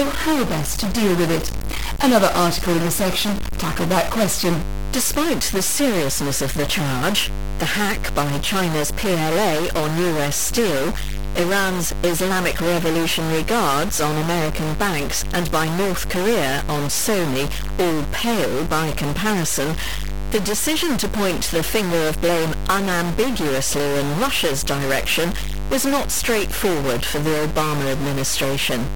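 From the first second to the end, a steady low tone sits under the speech. This is mains hum at 50 Hz, roughly 20 dB below the speech. A ground loop or nearby transformer has coupled the power line into the signal.

Also running the whole length is a harsh, buzzy distortion on the speech. The pauses do not go quiet. They fill with a gritty noise. The likely cause is a stuck bit, with a step size of around -20 dBFS.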